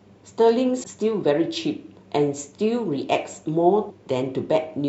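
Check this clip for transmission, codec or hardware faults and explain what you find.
Two brief glitches interrupt the speech: a short one from 0.79 to 0.84 s and another from 3.86 to 3.91 s. Both come from damaged data in a compressed stream: corrupted bytes make the decoder misread those frames and lose sync until it finds the next valid frame header.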